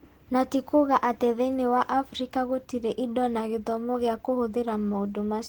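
Throughout the speech, the voice sounds hoarse and grainy, with a muffled, rough edge. The damage is plainly audible. It is likely Opus compression at a low rate, which fits about 16 kbps in hybrid mode. Content still reaches 20.1 kHz.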